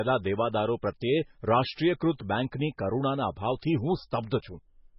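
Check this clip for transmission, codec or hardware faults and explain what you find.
Two codec faults are audible in this speech clip.

Throughout, nothing sounds above 5.6 kHz and the sound is heavily watery and swirly, likely MP3 compression starved of bits, pointing to a rate near 16 kbps. The swirl sets it apart from plain low-pass filtering.

At 4.30 s, a 12 ms pre-echo: quantisation noise spread across the block smears hiss just before an attack. It is distinct from a click because it leads the onset.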